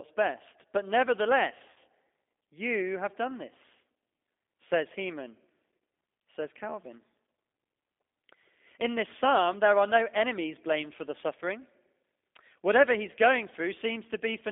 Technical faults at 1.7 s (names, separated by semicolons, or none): G.729 codec; VoIP packet loss concealed by the speech codec